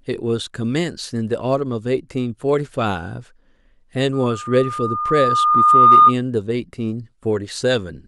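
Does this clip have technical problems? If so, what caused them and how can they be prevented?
Yes, there's a loudspeaker feedback squeal from 4.13 to 6.14 s. A single tone at 1.2 kHz swells over roughly two seconds until it sits around 15 dB above the speech. The mic is hearing the loudspeaker it feeds, and at that frequency the loop gain tops one, so the tone keeps feeding itself. To prevent it, keep the mic out of the speaker's coverage, lower the gain, or notch out 1.2 kHz.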